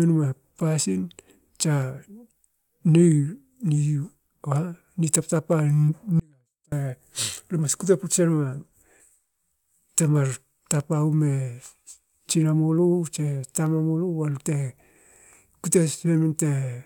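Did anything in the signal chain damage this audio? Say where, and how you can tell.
Yes. From 6.20 to 6.72 s the speech abruptly sinks to a faint leak about 35 dB down: an audio dropout to a faint residue, likely from a loose analogue connection.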